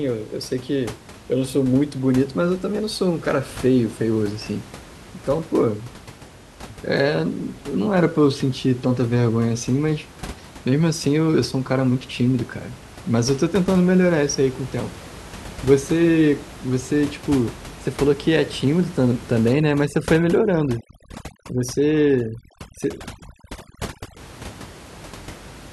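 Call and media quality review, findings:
Overdone noise removal, 19.53 to 24.17 s: room noise, about 18 dB below speech, drops and breaks up into twinkling specks; quiet parts of speech removed with it. Probable component: over-strong noise suppressor gating individual bands near its noise estimate. Unlike codec artefacts, the background drops and breaks into specks.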